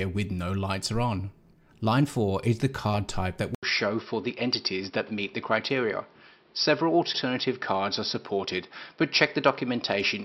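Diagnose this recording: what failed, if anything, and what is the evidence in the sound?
At 3.55 s an 80 ms gap, then nothing above 5.6 kHz and a new noise floor roughly 35 dB down, level unchanged: likely an input switched to a poorer device. The spectrogram shows a hard ceiling.

Repeated frames at the codec or storage stage: from 7.12 to 7.20 s a 78.4 ms block plays twice, a stutter that fits three compressed frames. The waveform shows an identical copy placed back to back.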